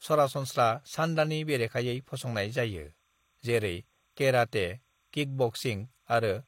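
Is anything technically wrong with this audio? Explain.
Yes. Timecode bleed runs from 0.41 s to the end. Linear timecode from a nearby track or cable leaks into the audio path, adding a square wave that flips between roughly 1 kHz and 2 kHz, consistent with 30-frame code. It sits about 45 dB below the speech as a steady chirping warble.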